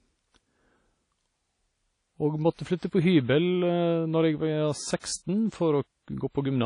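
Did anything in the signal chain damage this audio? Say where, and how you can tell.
Yes. At the codec stage, a low-bitrate transform encoder, likely WMA compression, removed everything above 10.1 kHz. Throughout, the speech sounds ringing and washy, with hiss that breathes with it.

That codec also spread quantisation noise back before a sharp attack. This pre-echo is heard as hiss from 5.00 to 5.04 s, about 42 ms long, which softens the onset.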